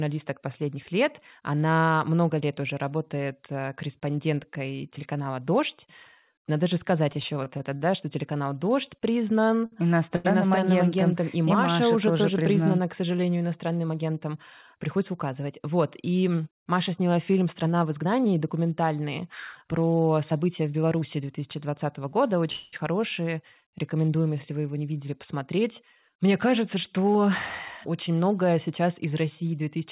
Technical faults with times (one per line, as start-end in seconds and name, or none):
7.12-7.92 repeated stalls (stutter)
9.66-9.74 short stall from a late packet
10.16-10.26 short stall from a late packet
13.86-14.33 jitter buffer speed-up
20.60-21.17 jitter buffer speed-up
22.52-22.74 call audio freeze
25.56-26.59 jitter buffer speed-up